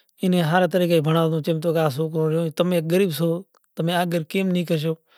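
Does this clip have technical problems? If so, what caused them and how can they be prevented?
No, there are no technical problems to point to in this speech clip. Since nothing has gone wrong, there is no cause to trace and nothing that needs preventing.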